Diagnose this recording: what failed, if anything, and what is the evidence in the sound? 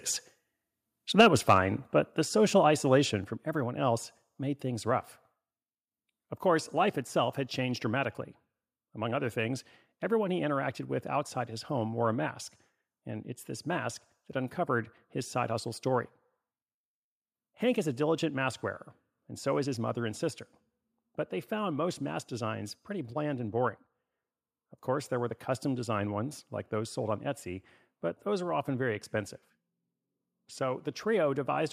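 The converter stage clipped from 1.19 to 1.57 s. The loudest syllables there take on a harsh, crackling edge, with peaks driven about 4 dB past full scale and a small share of samples flattened at the limit. This is likely microphone overload: the input gain was set so high that the converter could not represent the peaks and sliced their tops off. Codec distortion would smear across quiet passages too. This edge appears only on the peaks.

Call processing cut the level in four sudden steps, each finished within a single instant: about 3 dB at 1.21 s, about 3 dB at 2.22 s between "but the" and "social isolation from everyone", about 5 dB at 3.24 s after "but the social isolation" and before "from everyone else made", and about 2 dB at 7.02 s between "course life" and "had changed dramatically". The first step lands right inside the clipped stretch, which points to a likely microphone volume stepped down by software reacting to the overload. 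The background drops along with the speech, so this is a change in device input gain and not a smooth automatic gain control ride or a fade.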